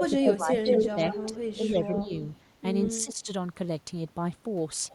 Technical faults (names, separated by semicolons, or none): speech suppressed in double talk; echo leak